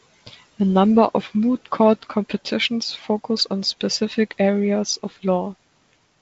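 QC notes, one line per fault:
No faults found in this speech clip.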